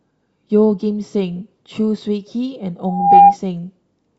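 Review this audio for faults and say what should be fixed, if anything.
A loudspeaker feedback squeal starts at 2.87 s and runs to 3.37 s. A steady tone near 802 Hz swells over about a third of a second. It ends roughly 15 dB louder than the speech. The microphone is picking up the loudspeaker it drives, and around 802 Hz the loop gain passes one. That tone then feeds on itself. To prevent it, lower the monitor gain, move the microphone away from the speaker, or notch out 802 Hz.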